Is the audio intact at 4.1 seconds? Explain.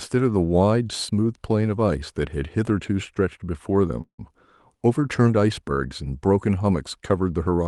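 No. A call audio freeze runs from 4.01 to 4.33 s. The sound before it is stretched into a fading buzz of about 170 ms, then drops to roughly 100 ms of silence before the speech resumes where it left off. This is likely a jitter buffer that ran empty while packets were held up in transit, so the receiver filled the wait. Nothing is lost, but the pause adds a 170 ms delay to everything after it.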